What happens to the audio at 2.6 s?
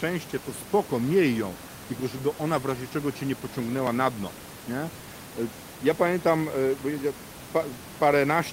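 Nothing goes wrong at 2.6 s: the speech carries on intact, with only the room noise about 15 dB below it in the background.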